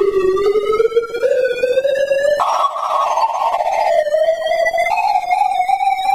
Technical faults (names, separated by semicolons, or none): compressed frames skipped